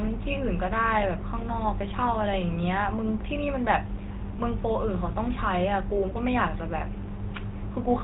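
Throughout the speech, GSM full-rate codec damage is plainly audible: buzzy, gravelly roughness from coarse pulse excitation, and a spectrogram cut off sharply at 4 kHz, consistent with 13 kbps coding.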